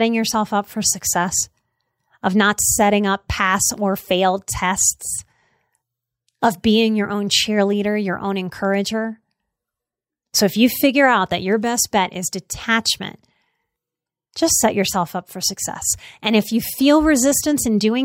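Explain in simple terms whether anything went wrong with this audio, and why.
Nothing went wrong that a listener would notice: listening to the whole recording of speech, nothing stood out as a problem.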